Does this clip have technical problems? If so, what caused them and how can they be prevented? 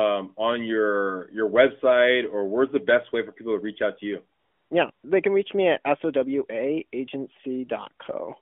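Yes. From 4.40 to 4.70 s and again from 4.92 to 5.04 s there's AMR comfort noise. The phone decided nobody was talking and stopped sending speech frames, so the far end patched those gaps with smooth synthetic hiss in place of the real background. Disabling discontinuous transmission, or making voice activity detection less aggressive, prevents it.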